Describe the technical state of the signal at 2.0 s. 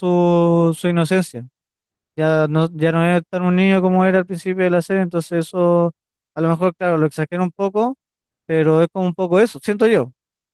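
At 2.0 s the speech is intact, with only the light smoothing expected of its Opus voice compression and no fault to be heard.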